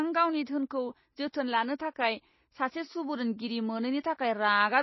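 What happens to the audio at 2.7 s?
At 2.7 s you're hearing the same damage that runs through the whole clip: the speech has a watery, swirly quality and nothing above 5.8 kHz. That's likely MP3 compression, at a bitrate that fits about 24 kbps, with the encoder cutting the top end and dropping weak frequency detail.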